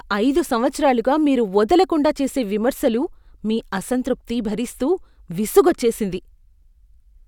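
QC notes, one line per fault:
No audible faults in this speech clip.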